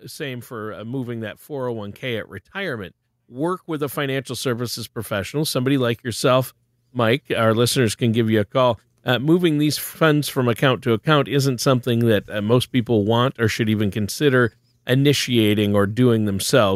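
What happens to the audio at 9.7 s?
Nothing goes wrong at 9.7 s: the speech continues cleanly through that moment with no dropout, click, distortion or other fault.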